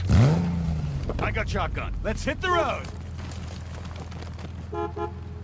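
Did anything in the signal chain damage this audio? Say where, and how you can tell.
No, the signal has come through a call path intact, with its content stopping at 8 kHz in the way a wideband call codec such as G.722 would leave it, and no stage in the chain has audibly damaged it beyond that band limit.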